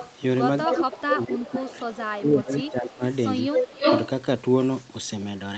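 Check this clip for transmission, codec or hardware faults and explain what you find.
Two faults are present: an echo leak and speech suppressed in double talk.

The echo leak occurs at 0.0 to 0.15, 0.65 to 1.24, 1.46 to 1.65, 1.91 to 2.03, 2.52 to 2.72 and 3.52 to 4.09 s. A delayed copy of the speech returns about 217 ms late, and about 323 ms late in the last stretch. It is likely from a loudspeaker on the far side whose echo canceller missed part of its microphone pickup. It is mostly about 15 to 20 dB down, near full level at 0.65 s, and about 5 dB louder than the speech at 3.52 s.

Speech suppressed in double talk occurs from 0.75 to 1.89 s and from 2.14 to 3.03 s, overlapping the echo. The speech dips by up to about 15 dB, then about 20 dB, for roughly 1.7 s in total. The likely cause is the canceller confusing talker and echo and turning both down.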